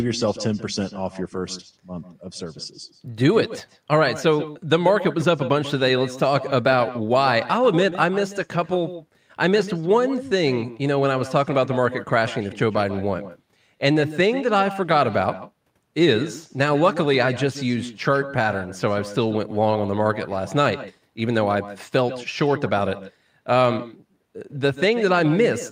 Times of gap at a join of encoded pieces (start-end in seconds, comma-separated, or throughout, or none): none